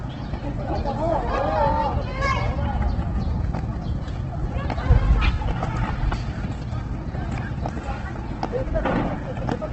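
Throughout, Opus compression likely explains the grainy, rough texture and nothing above 8.2 kHz. Bands are noise-filled rather than MP3-style swirling, which fits a rate near 12 kbps.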